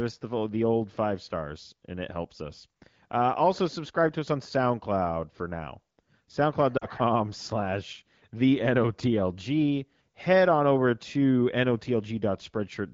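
At 6.77 s the speech briefly smears and sags, losing about 40 ms of audio, to 6.87 s, then resumes weak for a moment. These are lost AMR speech frames: corrupted frames failed their check, so the AMR-WB decoder, running at 15.85 kbit/s, repeated the last good pitch and vocal-tract settings at falling gain. The short duration fits two consecutive 20 ms frames, so the wideband concealment fades quickly and never reaches full silence.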